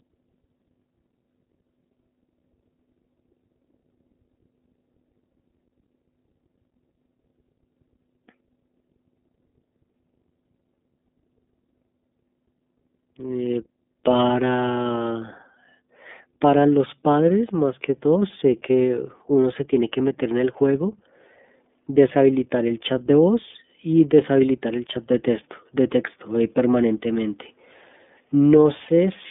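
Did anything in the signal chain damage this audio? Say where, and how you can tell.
Yes. Mains hum entered in the analogue wiring. A steady 50 Hz tone runs throughout, roughly 30 dB below the speech, as from a ground loop.

The iLBC codec also damaged it. Nothing passes above 3.7 kHz. The speech sounds plainly rough and synthetic throughout, which fits 13.33 kbps with 30 ms frames.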